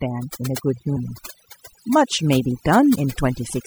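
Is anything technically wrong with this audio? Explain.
Yes, there are four problems.

Overdone noise removal runs throughout. The noise reducer was set too aggressively, pulling individual frequency bands down or out whenever they sat near its noise estimate. It took quieter parts of the voice with them, leaving near-silent gaps with twinkling specks.

MP3 compression damage is plainly audible across the whole clip. The swirly, watery texture, dulled treble and smeared consonant attacks most likely come from MP3 encoding at a low bitrate, around 64 kbps. The encoder starved weak frequency lines and let them flicker on and off between frames.

Mains buzz begins at 0.65 s and continues to the end, roughly 20 dB below the speech. Sharp switching spikes, twice per 60 Hz cycle, spread harmonics of 60 Hz up into the kilohertz range. The result is a steady, raspy buzz beneath the voice.

Damaged data in a compressed stream causes a brief glitch at 0.96 s and a longer one from 2.92 to 2.96 s. 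Corrupted bytes made the decoder misread frames and lose sync while it hunted for the next valid header.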